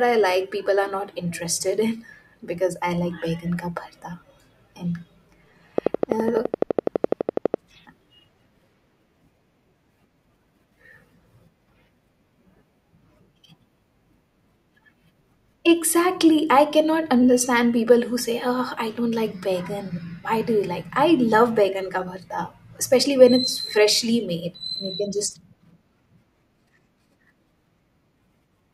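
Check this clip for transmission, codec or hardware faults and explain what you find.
One hardware-type fault is present: a train of clicks. From 5.78 s to 7.55 s a series of sharp pulses rides over the speech. They arrive at a steady 11.9 clicks per second, around twenty in all. Each has much the same shape, and they stand out by about 20 dB over the speech. The cause is likely electrical interference or a faulty connection or power supply injecting pulses. It sounds like rapid, even ticking, audible in the gaps too.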